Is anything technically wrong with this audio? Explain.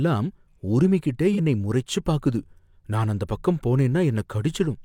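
Yes. From 1.33 to 1.39 s, just before "என்னை முறைச்சு பாக்குது நான்", there is AAC frame loss with concealment. About 43 ms of coded speech, which fits one lost frame, went missing. The decoder patched the gap from the last good spectrum, so the speech turns briefly smeared and noisy.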